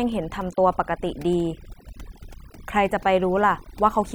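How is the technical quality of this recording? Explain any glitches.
The recording is hurt throughout by overdone noise removal. Bands near the estimated noise floor are cut almost to nothing, taking quiet parts of the speech too, so pauses fall to near silence with twinkling specks. Unlike a noise gate, which mutes everything at once, the cuts land band by band, even mid-word.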